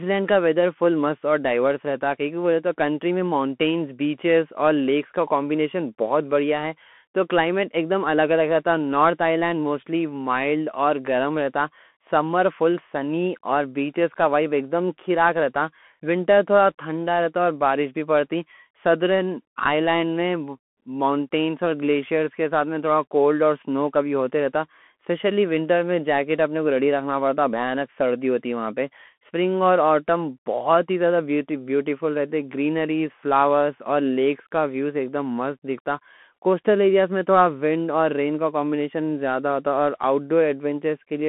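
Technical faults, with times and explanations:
Throughout, Bluetooth CVSD headset codec: the speech sounds boxed and phone-like, with scratchy s sounds, granular hiss and roughness on loud bright parts. Only about 200 Hz to 3.4 kHz passes, nothing above 3.8 kHz. This fits a 64 kbps one-bit delta coder whose adaptive step lags fast changes.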